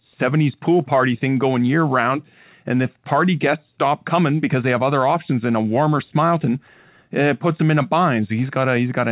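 No faults heard in the speech; the call path is band-limited with nothing above 4 kHz, which fits narrowband G.711 mu-law telephony at 64 kbps.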